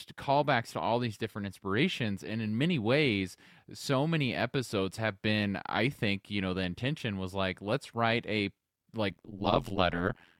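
From 9.10 s to the end of the clip at 10.40 s, the speech carries an overlap-add ripple. The signal was split into windowed frames and reassembled with an overlap whose windows do not sum to a constant gain, so the level swings once per frame, by about 60 dB, at a rate of around 100 Hz. The result is a harsh metallic buzz laid over the speech, with extra tones around each note.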